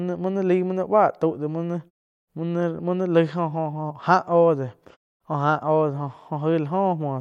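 No technical faults can be heard in this speech.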